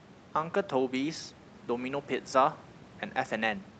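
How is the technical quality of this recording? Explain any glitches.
The technical quality of this recording holds up, with no glitches to explain.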